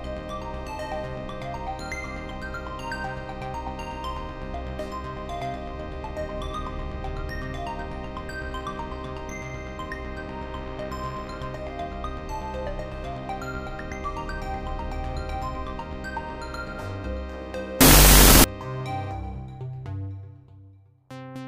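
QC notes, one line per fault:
17.81–18.44 s, wrong sample width: 16-bit integer data are read as unsigned 8-bit, so each original sample is split into two byte-sized values. The high bytes still carry the signal's top bits, but the low bytes behave like random values. The result is loud noise with the original buried inside, played at half speed and an octave low. On a spectrogram, dense broadband energy hides the stretched, lowered content. The waveform becomes a thick, noisy band.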